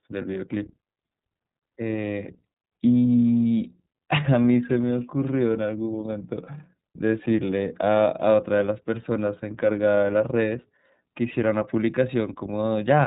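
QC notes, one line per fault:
Throughout, iLBC codec. The speech is band-limited, with nothing above 3.8 kHz, so sibilants lose their edge and the sound is dull and boxed in. Each 30 ms frame has its excitation coded on its own, with no help from the frame before. At this low rate, which fits about 13.3 kbps, the coding damage is plainly audible. Voiced sounds come out slightly rough, with a synthetic grain that stays across the whole clip.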